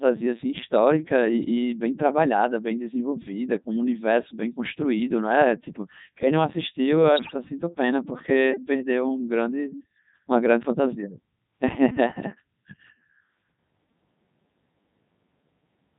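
From start to finish the speech has passed through the Codec 2 vocoder. Only pitch, voicing, energy and a coarse spectral envelope survive, and the damage is heavy even at its 3.2 kbit/s mode. The decoder rebuilds the voice from sine waves instead of the original waveform, so the speech sounds robotic and buzzy throughout, with a flat, synthetic texture.

From 7.16 to 7.34 s come bit errors on digital voice radio, corrupting the received stream at a rate of roughly seven percent. At such a low bitrate every bit steers a whole frame's pitch, level, voicing or spectrum, and the length of the disturbance points to around seven frames being hit. For those 0.18 s the synthetic voice jumps in pitch and loudness and changes tone colour abruptly, collapsing into warbling, bleeping gibberish.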